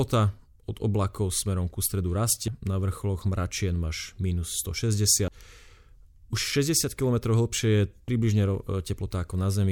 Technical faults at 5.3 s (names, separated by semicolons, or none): audio missing between chunks